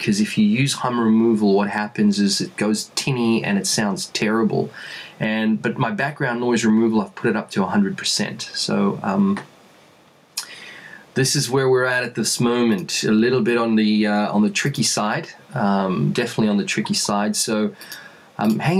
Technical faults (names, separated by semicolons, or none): gain pumping